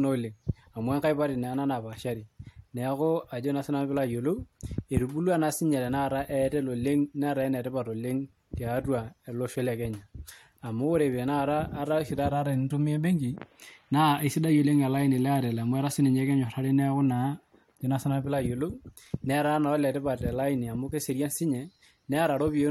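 No technical faults occur anywhere in the recording.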